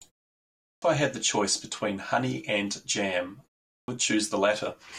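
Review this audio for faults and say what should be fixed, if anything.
Clipped start after a pause at 0.68 s and 3.73 s: after silences of 0.65 s and 0.33 s, the output path drops into an idle state and takes time to wake. About 141 ms and then 151 ms of speech vanish, so each phrase begins abruptly without its opening sounds. To prevent the lost onsets, keep the output device active through silences, for example by disabling its power-saving sleep or feeding it a continuous low-level signal.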